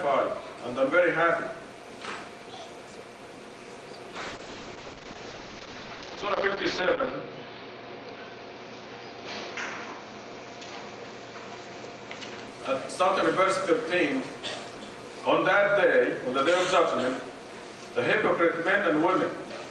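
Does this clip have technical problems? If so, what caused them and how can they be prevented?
Yes. A call bitrate drop runs from 4.17 to 12.53 s: the bandwidth estimate fell, so the encoder coded more coarsely and cut the top end from 20 kHz to 8 kHz. This fits a drop from about 40 to 8 kbps, bottoming out for nearly 3 s, with muffled, rough sound. Prevent it by keeping the network link stable and uncongested, or by setting a higher minimum bitrate for the call.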